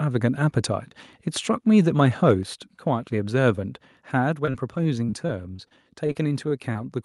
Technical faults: microphone overload; microphone volume stepped down; repeated packet loss (robotic sound)

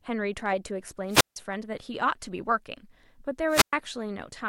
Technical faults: wireless microphone squelch dropout

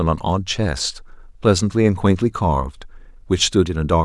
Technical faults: none

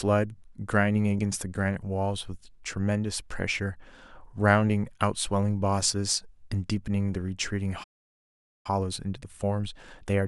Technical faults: playback stall; time-compressed catch-up

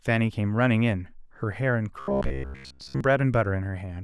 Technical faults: robotic sound from repeated short buffers

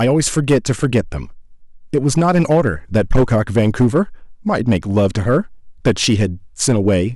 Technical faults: hard clipping

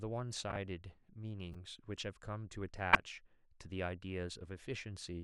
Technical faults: corrupt frame decoded

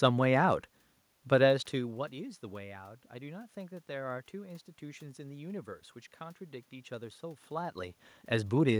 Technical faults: none

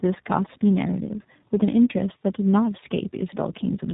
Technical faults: tandem speech coding

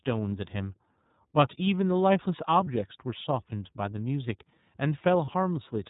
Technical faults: iLBC codec; lost iLBC frames

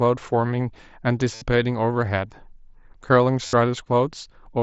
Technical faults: concealed Bluetooth headset packet loss

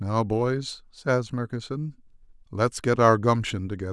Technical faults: none

